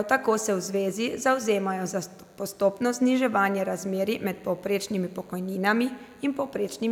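A nearby DECT handset or base station is transmitting a short radio burst every 10 ms, and the recording circuit rectifies it, so this speech clip carries DECT cordless phone buzz throughout: a steady, thin 100 Hz buzz with many harmonics, sitting roughly 40 dB below the speech.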